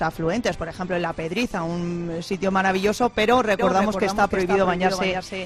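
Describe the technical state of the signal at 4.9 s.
At 4.9 s you're inside a doubled audio track that kicks in abruptly at 3.59 s and runs to the end. The same material is there twice: a full-band copy trails roughly 0.3 s behind, sitting around 5 dB under the original, with no decay or room colour on it. That's likely a second capture path running late, or an edit that left two copies out of step.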